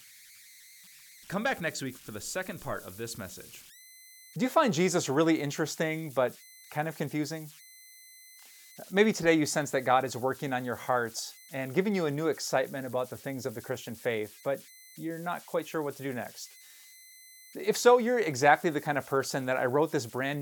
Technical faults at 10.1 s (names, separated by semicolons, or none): converter idle tones